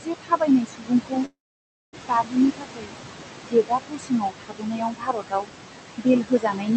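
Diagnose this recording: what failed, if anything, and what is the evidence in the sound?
The noise suppressor artifacts come from call processing and run through the whole clip. The room noise, only about 8 dB below the speech, is pulled down by about 21 dB in the pauses and comes back up under the talker, so the background pumps with the speech. That frame-by-frame pumping separates it from an automatic gain control, which would raise and lower speech and noise together.

Speech cut by the noise suppressor is also a call-processing fault. It happens from 0.0 to 2.96 s, from 3.46 to 5.51 s, and from 5.98 s to the end. Quiet consonants and syllable tails drop by up to about 22 dB and sound swallowed. This affects about one and a half seconds of the first stretch and about two seconds of the second. Only the soft parts vanish while louder speech stays intact, which tells it apart from a codec dropout or a level fault.

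The call audio freeze sits in the buffer stage, from 1.25 to 1.95 s. The sound stalls and is filled for about 675 ms, and roughly 570 ms of that is near silence. It then resumes exactly where it stopped, with nothing missing and everything after it running about 675 ms late. This is likely the jitter buffer running empty while packets were held up on the network. Packet loss would skip audio, but this freeze only inserts a gap. The Opus coding at 64 kbps, with audio up to 8 kHz, is the path's normal character.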